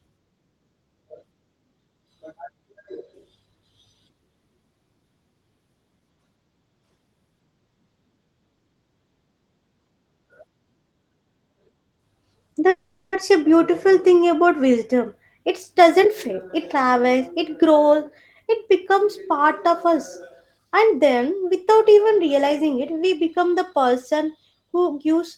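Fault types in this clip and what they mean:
Call audio freeze: From 12.69 to 13.14 s the last sound is held as a fading buzz for about 430 ms, then the speech resumes exactly where it stopped with nothing lost. The likely cause is delayed packets draining the jitter buffer, adding 430 ms of delay.
Jitter buffer speed-up: The receiver trims pitch-period slices to shed surplus buffered delay, so speech runs faster at unchanged pitch. After "thing about wisdom" it plays at 111% from 15.43 to 17.92 s, cutting roughly 0.3 s. It then plays at 105% from 18.45 to 21.30 s, just before "without even realizing it".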